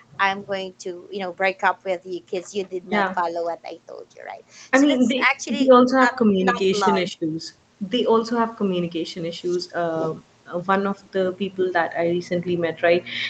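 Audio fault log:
No faults heard in this speech.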